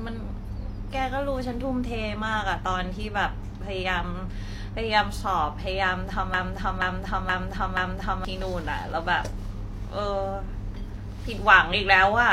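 At 6.34 s the speech locks into a broken-record loop: a fragment about 0.48 s long plays four times back to back, identical each pass, until 8.25 s. The likely cause is a stalled player or stream that kept resending the last chunk it held, so the speech that belonged in those two seconds never arrives. Unlike an echo, nothing decays or overlaps, and unlike a brief stutter, the repeated piece is long and exact.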